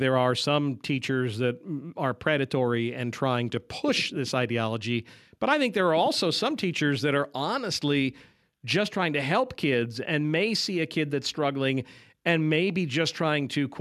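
No technical faults can be heard anywhere in the recording.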